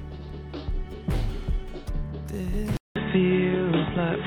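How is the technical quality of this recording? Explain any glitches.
The recording holds up until about 2.77 s, where it drops out for roughly 0.19 s and comes back duller and boxier through to the end. That's most likely the input switched to a poorer device, say a fallback mic or a headset's call mode. The new path cuts off everything above about 3.8 kHz, shifts the level by a few dB, and brings its own faint background noise, sitting well below the signal.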